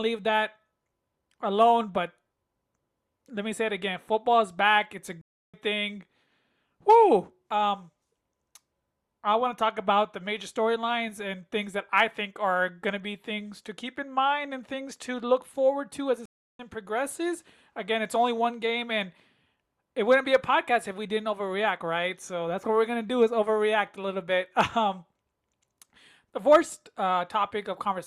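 At 5.21 to 5.56 s and again at 16.26 to 16.61 s, the speech drops out for a stream reconnect. The connection broke, and playback resumed on a fresh decoder, skipping ahead roughly 0.2 s and 0.3 s. The waveform flatlines for about 0.32 s and 0.34 s, showing as blank vertical gaps across the spectrogram.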